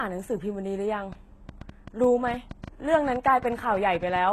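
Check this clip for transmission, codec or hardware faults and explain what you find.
Two faults are present: codec damage across the whole clip, and a train of clicks through most of it.

Throughout, the treble is likely rebuilt by HE-AAC compression at a low bitrate, around 16 kbps. The upper band is copied upward from lower frequencies rather than transmitted, so harmonics don't line up. Nothing sounds above 12.3 kHz, and the sibilants come out plainly gritty and metallic.

From 1.13 s to 4.17 s, a train of clicks likely comes from interference or a faulty connection or power supply injecting pulses. Around twenty similar clicks arrive at an irregular pace, about 7.6 per second, each roughly as loud as the speech, ticking through the sound and its pauses.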